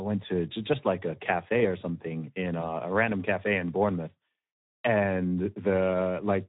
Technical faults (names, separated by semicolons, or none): Speex codec; VoIP packet loss concealed by the speech codec; bit error spike